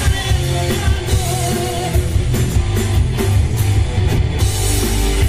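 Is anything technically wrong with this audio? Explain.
Yes, there are two faults.

At 2.52 s there is a block of digital silence. For about 0.43 ms the samples drop to zero and return with no fade. The abrupt cut and restart put an edge at each side. At this length it sounds like a single click.

From 3.96 s to 4.19 s there are frames out of order. Two neighbouring runs, each about 104.5 ms long, which fits runs of four frames, were swapped and decoded that way. The stretch plays its halves reversed and sounds like a garbled flutter. No time is lost.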